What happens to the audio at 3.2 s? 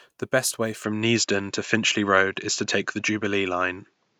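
At 3.2 s the speech is still on a narrower, duller sound that began at 0.84 s, just after "best way", and runs to the end. It is likely an input switched to a poorer device: nothing above 7.6 kHz, roughly 5 dB level shift, and a faint new noise floor about 50 dB down. The abrupt change in tone and background, with no gap at the switch, sets it apart from a gradual filter.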